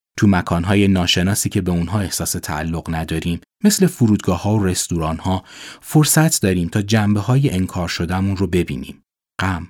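No technical faults can be heard anywhere in this speech clip, so there are none to describe in time order.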